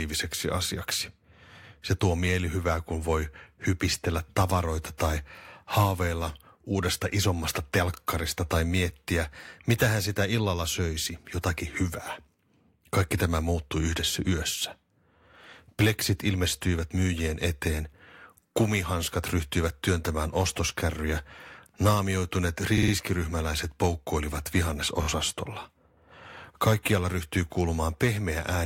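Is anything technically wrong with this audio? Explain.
Yes. The speech has repeated frames at 22.77–22.92 s, where a 52 ms block plays three extra times, and at 25.01–25.07 s, where a 26 ms block plays twice more. The decoder replays the same compressed frames, so each spot stutters, and the audio grows by about 157 ms and 52 ms. Unlike a dropout, nothing goes missing.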